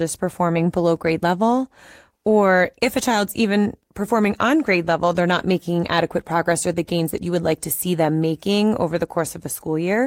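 No technical faults are audible.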